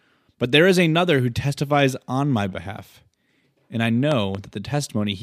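A loud pop arrives between 4.12 and 4.37 s: two sharp pops in quick succession, standing out roughly 10 dB above the speech, which carries on underneath without a break. The likely cause is a sudden voltage step or pulse entering the signal path, from a plug being seated, a switch, a static discharge or a driver glitch. The circuitry downstream shapes each pulse.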